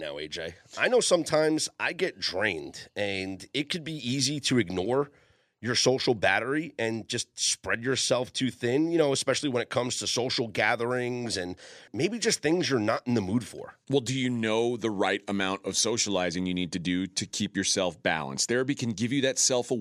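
No technical faults are audible anywhere in the speech.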